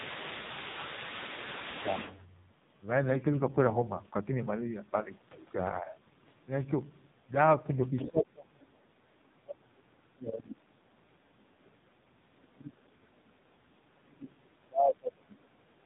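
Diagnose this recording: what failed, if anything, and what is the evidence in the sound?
AMR narrowband mobile codec, throughout, at the codec stage. Nothing above 3.8 kHz survives, and the speech has the buzzy, synthetic texture of heavy low-bitrate damage, consistent with one of AMR-NB's lowest modes, around 5.9 kbps. At that rate the codec rebuilds the voice from a vocal-tract model excited by very few pulses per subframe. Fine detail is lost, and the resonances come out coarse and mechanical.

Other side's voice leaking through, from 0.0 to 2.18 s, 7.96 to 8.09 s and 9.08 to 9.27 s, in call processing. A second voice sits under the talker, about 10 dB below the speech at the start, about 15 dB below in the brief scrap near 8 s, and only a faint trace about 40 dB down near 9.1 s. The likely cause is the echo canceller failing to fully subtract the loudspeaker signal the talker's microphone picked up.

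Speech suppressed in double talk, in call processing, from 0.09 to 1.96 s, 8.07 to 8.89 s, 9.37 to 11.97 s, 12.5 to 13.37 s and 14.04 to 15.52 s. The talker's level dips about 10 dB early on, then about 35 dB around 8.1 to 8.9 s and about 30 dB in the later stretches. This is likely the echo suppressor treating overlapping talk as echo and attenuating the near-end speech along with it.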